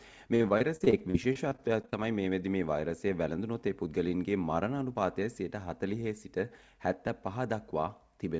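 From 0.36 to 1.94 s the sound turns choppy and robotic. This is repeated packet loss: audio kept going missing, and each hole was bridged by stretching the last bit of sound. Roughly a quarter of that stretch is patched, with holes up to about 43 ms. Unlike a single dropout, the gaps come in quick succession, leaving pieces of sound missing. The band stops at 8 kHz, which fits G.722.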